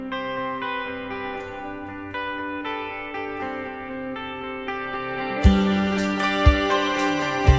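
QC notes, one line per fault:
Nothing stood out on listening.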